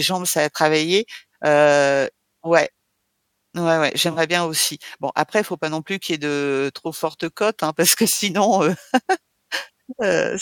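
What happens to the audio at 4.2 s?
Just before 4.2 s, from 4.12 to 4.18 s, the speech is covered over for about 60 ms. This is a corrupt frame concealed. Damaged AAC data was detected, and the decoder covered it, which fits roughly three frames. Then "bien aussi" follows.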